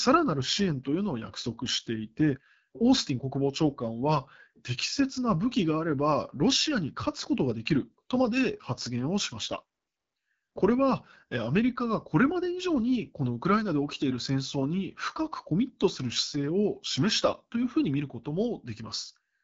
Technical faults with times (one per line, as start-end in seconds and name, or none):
0.00-19.43 AMR wideband (HD Voice) codec